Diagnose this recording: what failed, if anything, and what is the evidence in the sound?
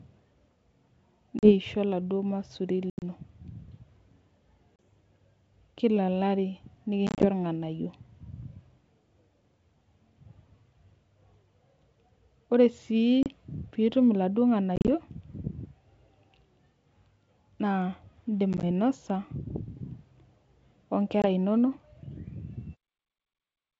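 Network packet loss on an ADPCM call. Silent, hard-edged gaps of 20 to 110 ms open at 1.39, 2.90, 4.76, 7.07, 13.23, 14.76, 18.53 and 21.22 s. Each loss throws the decoder's predictor and step size out of step with the sender's. Speech returns slightly distorted, then settles.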